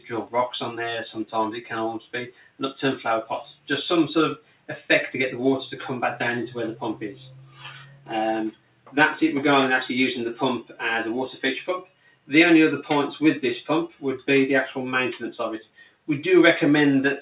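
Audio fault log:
Throughout: noise suppressor applied to music or sounds. A speech-tuned suppressor is clearly still engaged, and it keeps treating sustained tones, ambience and reverb as noise. Level swings by roughly 5 dB as it grabs and releases, so onsets punch through while held material and tails sag. You get a pumping, fluttery, thinned-out feel across the whole clip, on top of the narrow, 4 kHz-limited band of the call path.
2.03–2.6 s, 4.38–4.69 s, 7.42–8.1 s, 8.52–8.94 s, 11.85–12.29 s, 15.71–16.08 s: sound cut by the noise suppressor. In each of these stretches the suppressor decides the sound is noise and dives harder, pulling it down by about 12 dB at worst for roughly a third to half a second. Steady or decaying parts sink or get their tails chopped, while sharp attacks mostly survive, so the sound seems to duck out briefly.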